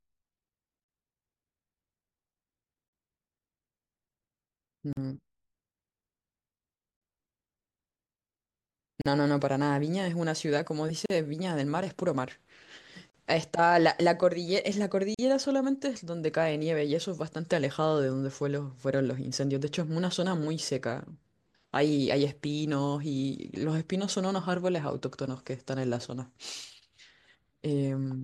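Speech drops out briefly at 4.93, 9.01, 11.06, 13.10 and 15.14 s. Each is a gap at a join of encoded pieces. Separately encoded chunks, mostly about 2 s apart, were joined untrimmed. Encoder delay and end padding leave a 43 ms silence. Edges are smeared.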